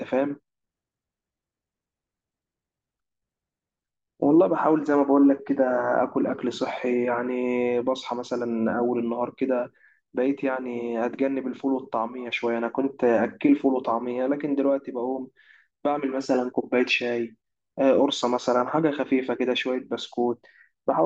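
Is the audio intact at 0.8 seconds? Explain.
Yes, at 0.8 seconds the speech plays through intact, with no dropout, click, distortion or other fault at that point.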